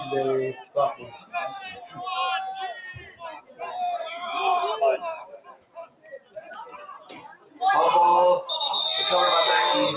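A noise suppressor built for speech stays active across the whole clip and treats sustained and ambient parts of the sound as noise. Level swings by around 15 dB as the gain rides up on attacks and clamps down on held or decaying material, so the audio pumps and thins against an already narrow band that stops at 4 kHz, consistent with a G.711 call codec.

The sound is cut by the noise suppressor in five places: 0.53–0.76 s (drop of about 14 dB), 0.94–1.34 s (about 14 dB), 1.72–1.98 s (about 8 dB), 2.96–3.61 s (about 15 dB), and the longest, 5.17–7.61 s, reaching about 17 dB. In each, steady or fading content sinks and its tail is truncated while sharper onsets survive, giving a fluttering, hollowed-out decay.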